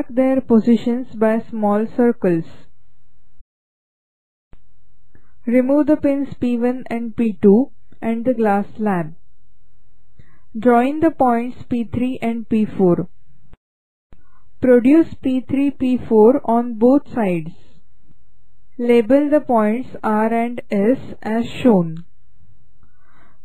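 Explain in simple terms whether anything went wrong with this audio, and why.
At 3.39 s the sound suddenly jumps ahead with a small blip, as if a piece in the middle had been cut out. This is most likely a stream segment skipped: one chunk of the stream failed to load, and the player carried on with the next one. What sets it apart from an ordinary dropout is that there is no silence or pause; the audio simply continues from a later point.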